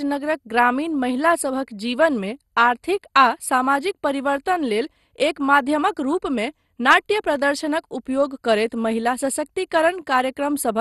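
Speech with plainly audible MP2 compression throughout. It sounds dull, with nothing above 12.2 kHz, and has a gurgling, granular roughness, likely from Layer II coding at a low rate that fits about 64 kbps. Unlike a simple low-pass filter, the upper bands flicker on and off.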